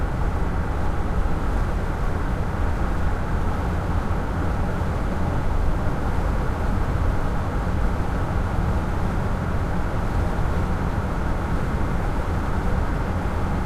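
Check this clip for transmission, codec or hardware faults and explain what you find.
No faults detected.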